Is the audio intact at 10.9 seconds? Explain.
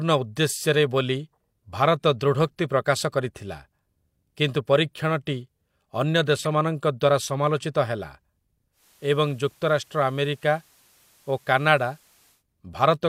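No. At 10.9 seconds the speech is inside a stretch of digital radio blending to analogue, running from 8.72 to 12.44 s. The receiver lost its digital stream and cross-faded over 147 ms to the FM broadcast of the same station, then later back. On FM, nothing above about 15 kHz, a soft hiss about 35 dB under the speech appears, and the level drops by about 2 dB. The short cross-fade and the added hiss set it apart from a codec simply dulling the treble.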